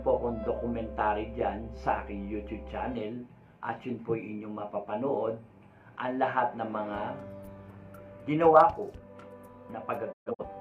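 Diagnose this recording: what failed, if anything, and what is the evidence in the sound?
Near the very end, between 10.11 and 10.44 s, the sound quickly fades to silence in broken holes totalling about 170 ms, the longest run 128 ms, with 20 ms fades. It is a digital broadcast dropout at reception: the receiver muted several lost or corrupted frames, and that audio is lost.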